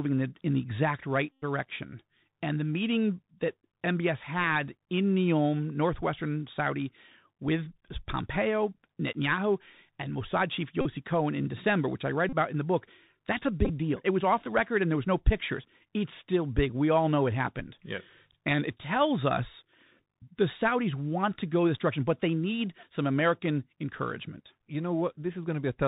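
Throughout, the speech is muffled and boxy, with scratchy s sounds, rough distortion on loud bright syllables and a granular hiss underneath. This is the Bluetooth CVSD headset codec at 64 kbps, which drops everything above 4 kHz and whose adaptive one-bit steps can't keep up with fast, loud changes. A brief buzzing rasp appears at 1.32 to 1.44 s, a shorter one at 10.81 to 10.85 s, another at 12.29 to 12.35 s, and a scattered flutter of ticks at 13.65 to 13.71 s. Each is a Bluetooth headset packet repeated: lost voice packets were replaced by replaying the previous one, covering about 101 ms, 38 ms, 34 ms and 23 ms, with the last spread over 45 ms in runs no longer than about 10 ms.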